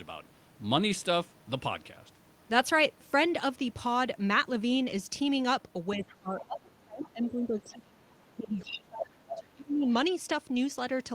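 From 5.95 to 9.87 s the speech dips and breaks up, losing roughly 25 dB at its deepest for around three seconds in total: speech suppressed in double talk, likely an echo canceller turning down both sides at once. Within that span, brief fragments of another voice surface at 6.03–6.14, 6.39–6.46, 7.24–7.30, 7.60–7.77 and 9.27–9.37 s, faint at first and most noticeable at the last. This is the other side's voice leaking through, likely loudspeaker echo the canceller failed to remove.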